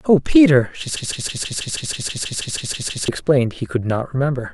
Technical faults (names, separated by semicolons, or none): broken-record loop